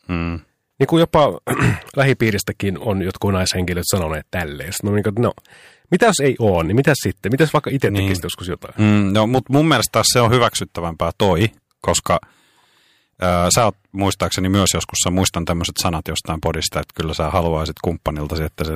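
Hard clipping runs throughout the speech: peaks pushed about 5 dB past the limit are sliced flat, a small fraction of samples, giving brief crackle on loud syllables.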